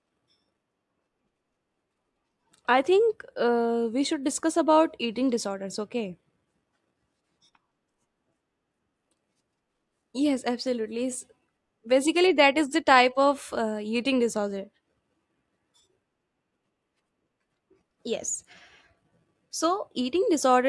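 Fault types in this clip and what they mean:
No faults can be heard anywhere in the audio.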